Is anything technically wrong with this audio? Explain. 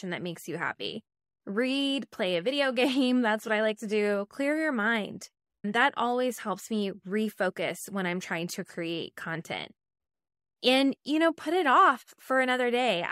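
No, nothing is technically wrong with this audio.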